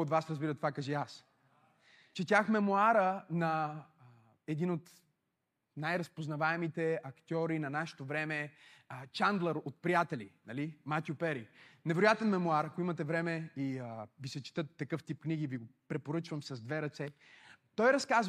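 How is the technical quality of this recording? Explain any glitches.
Nothing stood out on listening to this speech recording, and there are no glitches to explain.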